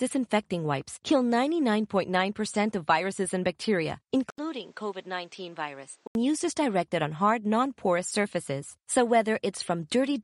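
A speech recording that, just after "of viruses and bacteria", turns dull and boxy from 4.30 s to 6.15 s, then clears before "used as directed on". The likely cause is an input switched to a poorer device. An 80 ms silence marks the switch, and the section runs about 10 dB quieter, with new noise roughly 30 dB below the speech. A spectrogram shows energy cut off sharply at 8.8 kHz, and the waveform a flat gap and then smaller amplitude.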